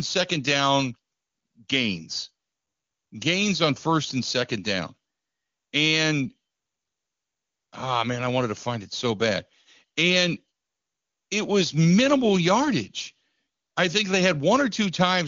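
Nothing goes wrong anywhere in this speech, which comes over the AMR wideband (HD Voice) codec at its top rate of 23.85 kbit/s, where any trace of the coding is faint at most.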